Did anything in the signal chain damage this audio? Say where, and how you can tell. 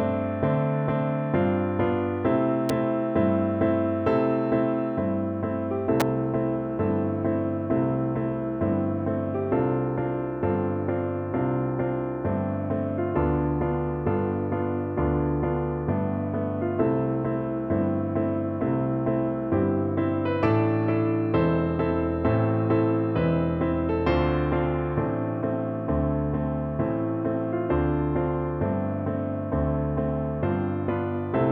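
Yes: two sharp snaps sit on top of the sound at 2.69 s and 6.00 s, likely an electrical switching spike from nearby arcing picked up in the analogue wiring.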